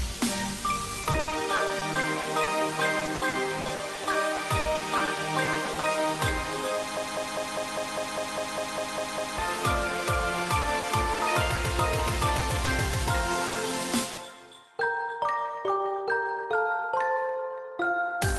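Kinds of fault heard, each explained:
Repeated packet loss (robotic sound): choppy sound from 1.0 to 5.9 s and again 10.6 to 11.6 s, as many short holes were patched with continued sound.
Broken-record loop: a 0.2 s fragment repeats back to back twelve times from 7.0 to 9.4 s, likely a stalled stream resending its last piece.
Short concealed packet loss: brief smears or wobbles near 12.39, 12.65 and 13.47 s, where 20 to 60 ms went missing and were filled from preceding sound.
Burst of packet loss: at 14.11 s a held buzz or fading hiss covers a 60 ms hole, then the audio resumes with that stretch missing.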